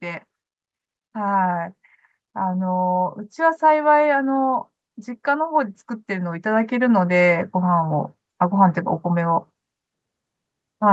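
Automatic gain rising occurs from 2.34 to 4.57 s and again from 5.24 to 8.05 s: the gain control judged the speech too quiet and raised its level gradually, by about 5 dB and then about 4 dB, so voice and background swell together over several seconds.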